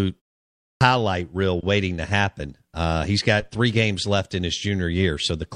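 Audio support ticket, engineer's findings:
Clipped start after a pause at 0.74 s. Onset of "reel waiting to happen" lands abruptly out of silence, first sounds gone. About 69 ms swallowed after a 0.61 s pause. Output device slept in the gap and needed time to wake or relock.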